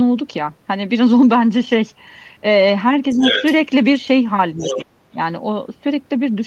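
From 3.1 to 3.55 s, the other side's voice leaking through sits only a little below the talker. This is a second voice added on top rather than anything taken away, likely loudspeaker echo the canceller left behind. Inside that stretch, from 3.14 to 3.24 s, speech is suppressed in double talk: the talker's own voice sinks by about 10 dB, likely because the canceller ducked both voices at once. The same dip recurs more gently at 4.55 to 4.6 s. The leak returns, fainter, from 4.58 to 4.85 s. Then from 4.76 to 5.18 s the talker falls almost to silence in pieces.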